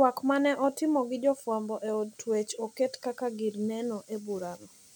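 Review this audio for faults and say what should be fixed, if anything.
No technical faults are present in the speech signal, so nothing needs fixing.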